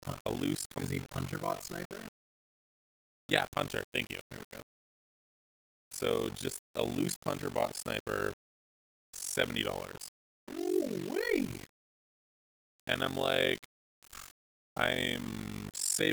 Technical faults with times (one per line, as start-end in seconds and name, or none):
0.00-16.12 low bit depth without dither
0.00-16.12 overlap-add ripple